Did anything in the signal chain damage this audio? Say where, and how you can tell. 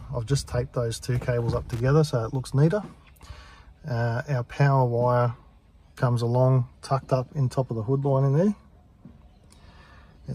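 Yes. A short, irregular burst of scratchy crackle runs from 1.71 to 1.80 s, in the analogue wiring. This is loose connector crackle: a worn or dirty contact flickering open and closed, chopping the signal and popping wherever DC sits on the line.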